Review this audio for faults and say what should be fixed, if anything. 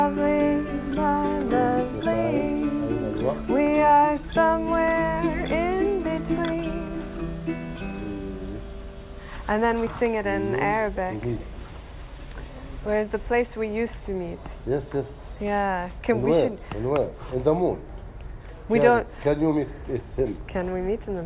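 Nothing stood out on listening, so there is nothing here that needs fixing.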